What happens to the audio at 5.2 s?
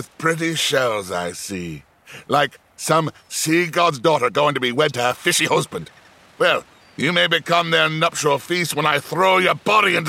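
At 5.2 s you're in the middle of a time-stretched section that runs from about 3.76 to 7.18 s. The pace suddenly jumps to roughly 1.43 times normal while the pitch stays put, so it comes across rushed. That's likely software squeezing the passage to fit a shorter length, dropping short slices of audio to hold the pitch steady.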